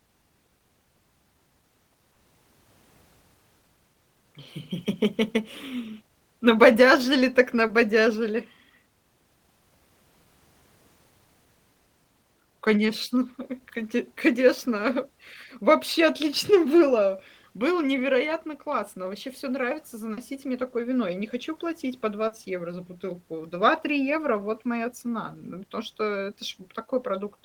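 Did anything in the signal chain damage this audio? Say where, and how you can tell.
Yes, at the network stage: short concealed packet loss in four places. About 20 ms of the speech failed to arrive in time at 2.13–2.16 s and 7.67–7.70 s, and about 40 ms at 20.13–20.18 s and 22.27–22.32 s. Each time, the decoder bridged the gap by extending the preceding sound before fading back into real audio. You hear a brief smear or wobble.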